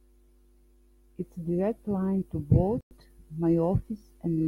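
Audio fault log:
2.81–2.91 s, Bluetooth stall: the speech drops to complete silence for about 103 ms, then resumes cleanly. The gap is a hard cut with no fade or smearing, which points to the receiver running out of buffered audio rather than to a codec fault. The likely cause is radio interference delaying packets on the wireless link, so playback paused until the retransmitted data arrived and the buffer refilled.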